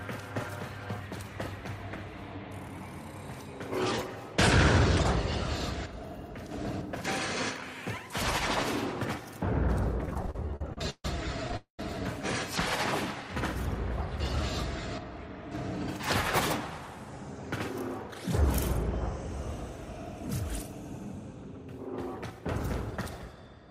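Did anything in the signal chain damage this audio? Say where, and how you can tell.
Yes. In the network and jitter buffer stage, packets kept arriving late between 10.02 and 11.54 s. There are repeated stalls (stutter): 14 short gaps, the longest 143 ms, filled by continuing the last sound. About a quarter of that stretch is filler, so the audio drags and stutters.

Just after, from 11.57 to 11.80 s, comes a call audio freeze. The last sound is held and fades for about 221 ms, with roughly 120 ms falling to silence before the audio resumes where it stopped. A likely cause is packets held up in transit emptying the jitter buffer.

From 22.16 to 23.37 s, a jitter buffer speed-up shows the receiver draining excess buffered audio. It trims pitch-period-sized slices, around 70 ms in total, so the sound runs at 105% speed with unchanged pitch and comes across as slightly hurried.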